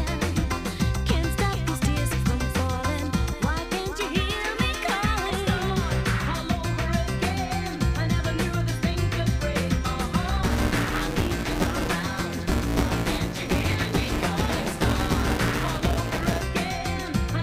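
From 10.43 s to 16.43 s the sound takes on a steady robotic buzz, a rattling edge at about 172 Hz that rides on everything present and falls away in gaps. This is buffer tearing: the software filling the ring buffer and the hardware draining it have drifted out of step, crossing inside each period, which fits a 256-sample buffer. A bit under half of every period replays audio from roughly ten milliseconds earlier, spliced in with hard joins on both sides.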